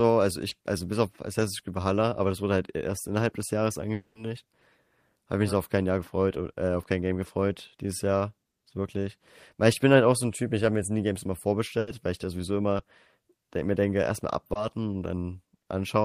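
It's a speech recording with a handful of network-loss problems. The mildest are three bits of short concealed packet loss, at 0.49 to 0.53 s, 12.77 to 12.81 s and 14.53 to 14.57 s. Each time about 20 ms of audio never made it to the decoder in time, and the receiver papered over it by extending whatever sound came just before, then sliding back into the real signal. You get a quick smear or wobble rather than an obvious gap. A bigger hole opens from 3.93 to 4.17 s. The sound carries on as a fading synthetic continuation, about 220 ms in all, ending in roughly 60 ms of silence before the speech picks up again further along, with the stretch in between simply gone. That fits a long network dropout, likely a stall where nothing arrived for a while and the concealment eventually gave up and went quiet. Finally, from 11.79 to 11.89 s there's a burst of packet loss. About 80 ms went missing in one run. 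The receiver held the last sound and let it decay over that span, so a voiced bit turns into a sustained buzz and anything unvoiced into a dying hiss, and then the audio resumes with that 80 ms skipped over.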